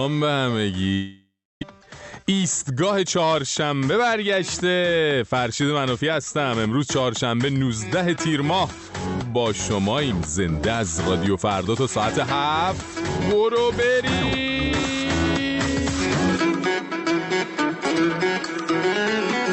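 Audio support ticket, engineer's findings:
Long network dropout, 0.93–1.63 s: audio stops, replaced by a fading buzzy continuation, then about 0.31 s of near-silence before audio resumes with content missing. On the waveform, the envelope decays into a flat gap. Likely cause: packet loss on the network path.

Jitter buffer speed-up, 1.71–3.36 s: playback runs about 10% fast at unchanged pitch and sounds hurried. Repeated pitch-period cuts remove around 150 ms in total, draining the excess delay. The spectrogram shows compressed timing with harmonics at unchanged frequencies.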